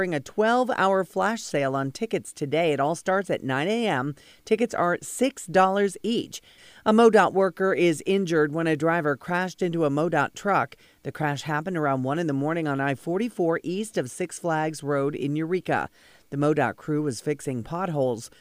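No faults detected anywhere in the speech.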